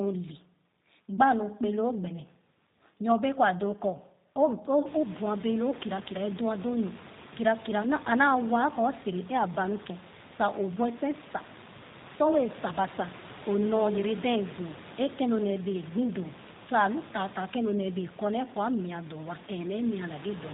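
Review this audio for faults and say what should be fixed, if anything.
The speech carries G.729 codec damage from start to finish, and it is plainly audible. Nothing above 4 kHz survives. The voice sounds rough and slightly synthetic, which fits an 8 kbit/s G.729A path. The room noise that rises around 5 s warbles through it. Prevent this by carrying the call on a wideband codec at a higher bitrate.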